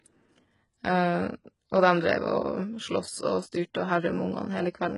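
From start to finish the speech carries heavy codec damage, and it's most likely HE-AAC compression at a very low rate, the sound fitting something around 12 kbps. The treble is there but isn't real: upper bands get rebuilt from copies of lower ones, so the s sounds come out gritty and metallic, never quite matching the body of the voice. Above roughly 11.1 kHz there's nothing at all.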